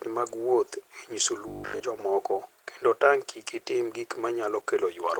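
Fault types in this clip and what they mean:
Opus voice compression: the whole clip passes through Opus at 16 kbps in hybrid mode, SILK coding the lower band with a CELT layer above it, in 20 ms frames. The excitation is coded coarsely, so the speech sounds plainly muffled, hoarse and faintly robotic throughout.
Robotic sound from repeated short buffers: from 1.48 to 1.82 s, just before "jomoko kendo", the speech turns into a rigid metallic buzz near 50 Hz, likely from a 20 ms block being replayed in place of new audio. Roughly 70% of that stretch is repeated material.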